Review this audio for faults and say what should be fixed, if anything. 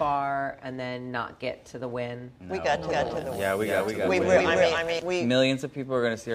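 From 2.90 s to 5.00 s the audio carries a doubled audio track: a second full-band copy trails the original by about 300 ms at roughly the same level, with no decay or room colouring, and it appears and disappears abruptly. The likely cause is the signal being captured twice, once through a slower path, or an edit leaving two copies out of step. On a spectrogram every event repeats as an identical shifted image about 0.3 s later. On the waveform, envelopes overlap into a denser, busier trace that cuts in and out cleanly at both boundaries. To prevent it, make sure each source is recorded or routed only once and check edits for overlapping duplicate regions.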